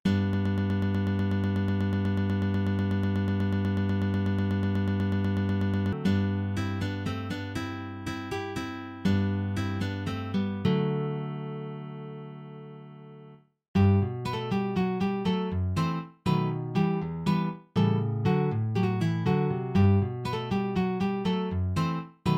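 From 0.33 s to 5.93 s, a broken-record loop: a 0.12 s fragment repeats exactly, back to back, 46 times, likely because playback stalled on its last fragment. Unlike echo, the repeats never decay, and the audio due then is lost.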